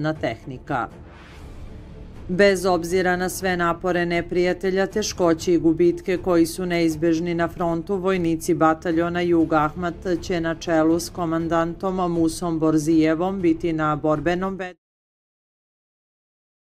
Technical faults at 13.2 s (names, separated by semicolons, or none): none